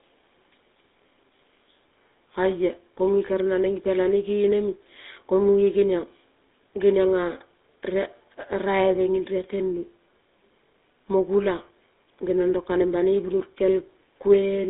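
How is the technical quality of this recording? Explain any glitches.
The quality is poor throughout. The speech has passed through the GSM full-rate codec for the whole clip. The codec rebuilds the voice from a vocal-tract model excited by sparse, regularly spaced pulses, which fits a 13 kbps stream. That gives a plainly audible buzzy, gravelly roughness. The sound sits in a narrow 250 Hz to 3.7 kHz telephone band. On a spectrogram, everything above about 3.8 kHz is empty.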